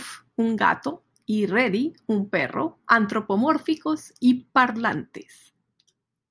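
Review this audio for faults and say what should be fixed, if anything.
Nothing in this speech recording needs fixing, as no technical fault can be heard at any point. No repair or preventive step is called for.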